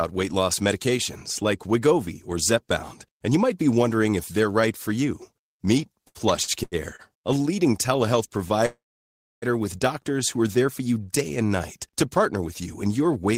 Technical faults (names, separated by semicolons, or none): repeated stalls (stutter); call audio freeze